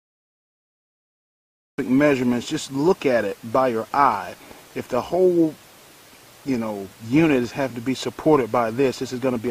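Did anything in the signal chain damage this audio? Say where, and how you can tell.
Yes: a cut-off start at 1.78 s. The file opens with digital silence from 0 to 1.78 s, and the audio then appears abruptly in the middle of an ongoing sound, with no natural attack or fade-in. That points to the capture or buffering stage starting late. The recorder or stream was already writing the file, but no signal was reaching it, so the opening of the sound was never captured and cannot be recovered.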